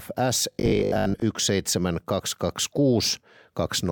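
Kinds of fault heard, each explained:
Robotic sound from repeated short buffers: from 0.52 to 1.22 s the speech turns into a rigid metallic 50 Hz buzz, likely from a 20 ms block being replayed while about half the real audio is skipped. The waveform shows identical repeating cycles, and the spectrogram shows evenly spaced harmonics.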